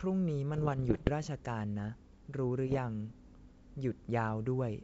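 Bit errors on an ADPCM link, 0.54–1.10 s and 2.66–2.79 s: flipped bits upset the decoder's step size and predictor, causing pops and rough, level-jumping bursts.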